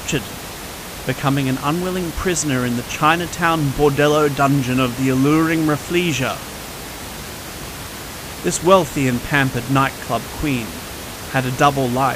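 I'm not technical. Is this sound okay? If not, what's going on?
Yes, nothing stood out on listening to this speech recording; the only other thing you can hear is some ordinary background noise from the room, sitting well below the voice.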